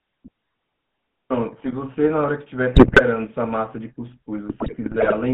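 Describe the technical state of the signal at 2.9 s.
GSM bit errors run from 2.74 to 3.01 s, covering 2.9 s. Corrupted bits reach the decoder and spoil the filter, pitch and gain values, so each damaged frame comes out with a bent spectrum or a jump in level. The sound breaks into squawks, pops and gargling across this span, which points to roughly a dozen damaged frames and several percent of bits flipped.

Underneath, the GSM full-rate codec shapes the whole signal. It models the vocal tract and drives it with sparse, regularly spaced excitation pulses, which gives the audio a plainly audible buzzy, gravelly roughness. The band is confined to about 150 Hz to 3.5 kHz, consistent with 13 kbit/s full-rate coding.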